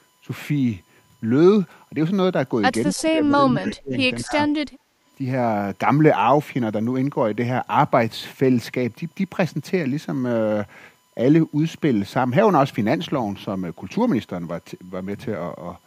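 A steady USB whine at 1 kHz runs under the whole clip, about 45 dB below the speech. Its pitch never moves, and its 1 kHz frequency separates it from mains hum and points to current drawn in the bus's 1 ms frames leaking through power or ground.

From 2.93 to 3.94 s the speech is suppressed in double talk, dipping by as much as about 20 dB across roughly 0.7 s in total, and again from 4.22 to 4.38 s for a short stretch. The likely cause is an echo canceller turning everything down because it cannot separate the local talker from loudspeaker echo.

Inside those dips, echo leak appears at 2.98 to 3.03 s, 3.64 to 3.71 s and 4.29 to 4.33 s. These are faint scraps about 25 dB down, trailing the original by 232 ms, which likely means residual far-end loudspeaker sound was passed back. The fixed delay marks them as echo rather than reverberation.

From 4.7 to 4.91 s the background is gated by the echo canceller, with room sound dropping about 15 dB for roughly 0.2 s and then returning.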